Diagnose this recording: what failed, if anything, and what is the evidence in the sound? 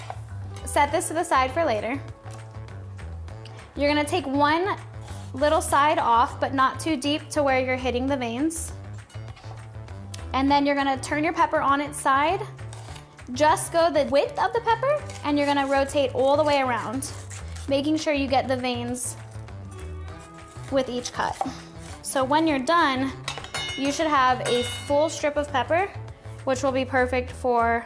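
Nothing failed: no stage from capture through playback leaves any audible trace of a fault anywhere in the recording.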